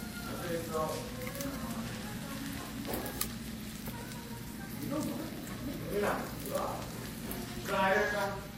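Throughout the audio, artefacts of three different kinds sit on top of each other, and nothing above 16.2 kHz remains. This points to transcoding between lossy codecs, likely a low-bitrate HE-AAC encode passed through Vorbis and then WMA, each stage re-encoding the previous stage's damage.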